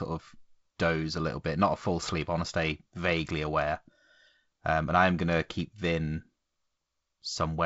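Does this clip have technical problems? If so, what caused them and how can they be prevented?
No, nothing stood out on listening to this speech.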